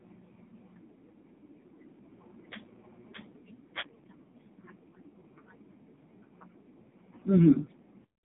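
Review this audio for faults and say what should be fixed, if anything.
Thin, buzzy and synthetic throughout, with nothing above 3.8 kHz: AMR narrowband mobile codec damage, a 150 Hz to 3.7 kHz line squeezed heavily, consistent with a mode near 5.9 kbps. Use a wideband or higher-bitrate path so the audio isn't forced through narrowband AMR.

From 1.86 s to 3.36 s, a second, about 5 dB quieter copy trails by about 0.7 s and cuts in and out abruptly: a doubled audio track, likely from a second, slower capture path. Make sure only one capture path feeds the mix.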